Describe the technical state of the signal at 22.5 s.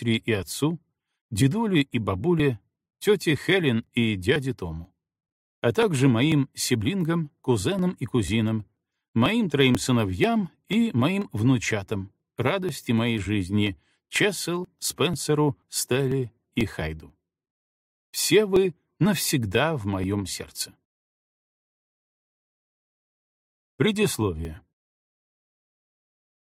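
At 22.5 s the signal is inside a run of periodic USB or driver dropouts that spans 0.43 s to 26.41 s. Every 0.49 s something blocks the USB bus or audio driver, and roughly 10 ms of audio is skipped outright, so the waveform jumps forward rather than pausing. Each gap produces a short tick or pop, audible only where sound is present, repeating at a steady rhythm of about two per second.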